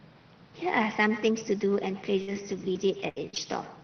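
Speech carried over an Opus call path whose 6 kHz audio bandwidth fits a low-bitrate setting, with several transport faults. Echo with no canceller runs throughout: a thinner copy about 14 dB below the talker trails each phrase by roughly a tenth of a second, picked up from the far end's loudspeaker. A burst of packet loss from 2.21 to 2.29 s is concealed by stretching the last sound for about 57 ms before the audio jumps ahead, skipping roughly 60 ms. Lost packets rebuilt from error correction at 2.27 to 2.29 s and 2.35 to 2.37 s play without gaps but sound rougher and noisier for 20 ms each. Repeated packet loss from 2.73 to 3.38 s opens four holes, the longest 72 ms, patched over about a fifth of that span, with some frames also rebuilt, giving choppy speech.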